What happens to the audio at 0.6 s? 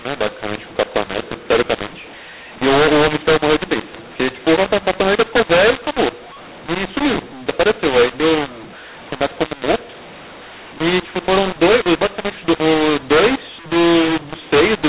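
At 0.6 s you're hearing the mu-law and A-law mix-up, which runs through the whole clip: mu-law telephone samples decoded as A-law, so levels scramble into harsh distortion and hiss fills the pauses.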